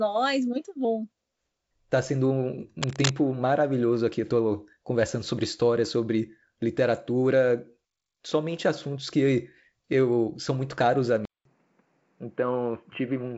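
From 2.82 to 3.11 s, between "sendo um" and "maravilhoso aqui", a burst of cable scratch noise rides over the speech at roughly the same level. It is dense, irregular scratching, likely from a worn connector or lead being moved. Unlike a dropout or click, the signal continues underneath the rustle.

At 11.25 s, after "são muito caros a", the input switched to a poorer device. About 200 ms of silence comes first, then the speech stays narrowed to nothing above 3.1 kHz until the end, with a new noise floor about 40 dB down. The loudness stays roughly the same, so this sounds like a change of microphone rather than a volume fault. This is likely a swap to a headset's call profile. The earlier G.722 wideband coding at 56 kbit/s reached about 7.7 kHz, so the drop to a boxy telephone band is clear.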